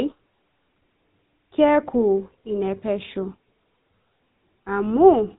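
From the very start to the end, this speech has been through the GSM full-rate codec, and the damage is plain to hear. It's the old mobile-phone sound: everything above 4 kHz is gone, so it's narrow and boxy, and the voice has that buzzy, gravelly grain because the codec rebuilds it from a vocal-tract model driven by a thinned-out pulse train. The rough texture fits the standard 13 kbps full-rate mode.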